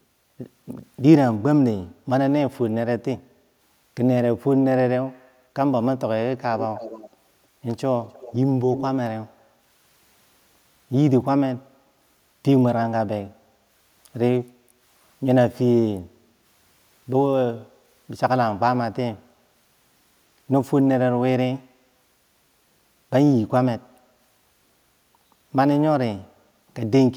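An echo canceller at the far end, where the call was likely played on a loudspeaker, let part of its microphone pickup through and sent it back. The result is echo leak: a delayed copy of the speech, trailing by about 306 ms, surfacing in short scraps from 6.58 to 7.1 s, 8.13 to 8.34 s and 8.75 to 8.85 s. It sits roughly 15, 20 and 10 dB below the direct speech respectively, so the last scrap stands out most.

At 14.55 to 14.81 s the echo canceller clamped the microphone down while the loudspeaker was active, producing background gated by the echo canceller. The room tone beneath the speech dips by about 7 dB for roughly a third of a second, then returns once the suppression releases, leaving a brief hollow gap in the ambience.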